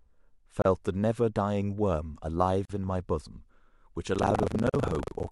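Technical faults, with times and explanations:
0.62–0.65 s, 2.65–2.70 s, 4.70–4.74 s: gap at a join of encoded pieces. Brief silences of 33, 43 and 43 ms recur every 2.0 s, from separately encoded pieces joined with their encoder delay and padding left in.
4.12–5.31 s: buffer tearing. A rough 25 Hz buzz runs to the end because writer and reader slipped, leaving roughly a fifth of each buffer holding audio about a tenth of a second old.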